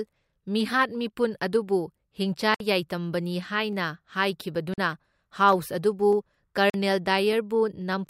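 A speech recording carries clicks at a steady 0.6 s interval from 0.13 s to 7.93 s, about fifteen in all. These are clock drift buffer slips, likely caused by two devices whose clocks disagree by something like 300 ppm, so a handful of samples is dropped or repeated at each slip. Separately, three blocks of digital silence open short holes at 2.55 s (58 ms), 4.74 s and 6.70 s (43 ms each). The last two fit a 2048-sample buffer left unfilled in time. Each hole cuts to silence and back with no fade. The holes are audible gaps at uneven times, whereas the slips are single, evenly spaced ticks with no missing stretch of sound.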